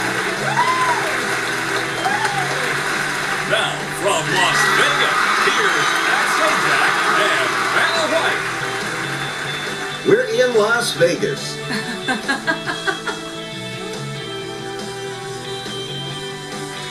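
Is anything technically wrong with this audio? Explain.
Yes. At 5.19 s, compressed frames were skipped: a run of several frames, missing from the file or refused by the decoder as damaged, never played. The sound jumps ahead by about 150 ms.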